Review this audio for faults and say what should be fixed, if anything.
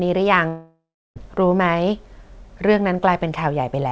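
Long network dropout, 0.48 to 1.18 s: about 0.7 s of audio never arrives, likely from a network outage. The receiver stretches the last sound into a fading buzz, leaves about 0.33 s of near-silence, then resumes past the lost stretch. Enabling forward error correction on the call link and fixing the sustained packet loss on the network would prevent it.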